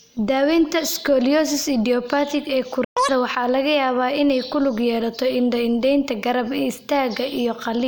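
At 2.84 s the speech cuts to silence for 120 ms, until 2.97 s: a playback stall, likely the player running short of data or its output thread being blocked. From 2.97 to 3.09 s comes catch-up at higher speed, with the backlog resampled at 2.0 times normal, so the speech briefly runs fast and jumps nearly an octave in pitch.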